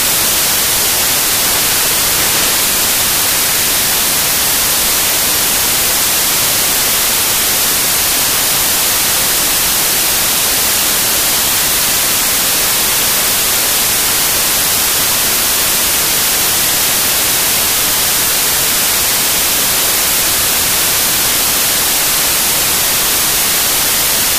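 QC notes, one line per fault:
Throughout: samples built from the wrong bytes. Misassembled sample bytes push rapidly changing low bits into the high positions, giving loud, harsh broadband noise, close to white on loud sounds.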